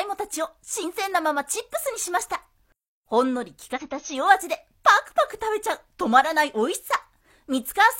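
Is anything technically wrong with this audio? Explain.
Yes, there is damaged data in a compressed stream, at 0.79 to 0.85 s and 3.72 to 3.91 s. Corrupt bytes leave the decoder misreading frames and hunting for the next valid header, so each stretch comes out as a brief glitch. On a spectrogram these are abrupt blocks of smeared, broadband or oddly banded energy with hard vertical edges; the waveform shows a sudden discontinuity, the longer second burst clearly wider.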